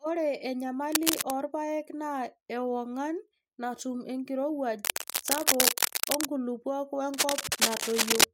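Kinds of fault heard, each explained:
Cable scratch noise: dense, ragged bursts of rustling scratch over the speech from 0.92 to 1.35 s, just before "irpaek naa ewongan natum", then from 4.83 to 6.25 s after "naa ewongan natum enkirowuaj", and from 7.14 to 8.24 s, roughly level with the voice or louder. On a spectrogram these appear as broadband, speckled smears; the waveform shows irregular spiky clusters. The likely cause is a worn cable or connector being moved, so its contact resistance fluctuates rapidly.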